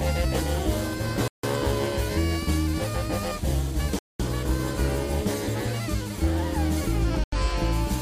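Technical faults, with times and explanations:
1.28–1.44 s, 3.99–4.20 s and 7.24–7.32 s, Bluetooth stall: the sound drops out to dead silence three times, for about 155 ms, 208 ms and 86 ms, then resumes. Those clean gaps are most likely the wireless link hiccupping. Interference delays the packets, the headphones drain their small buffer and have nothing to play, so output simply stops until the retransmitted audio arrives and fills the buffer again.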